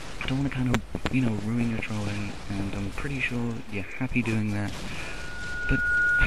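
Loudspeaker feedback squeal begins at 4.99 s and runs to the end of the clip at 6.27 s. A microphone was picking up the loudspeaker it was feeding, and at 1.4 kHz the gain around that loop rose above one, so the tone kept reinforcing itself. It swells over about a second into a steady single-pitched squeal, ending up roughly 5 dB above the rest of the sound, and the loop is never broken before the clip stops.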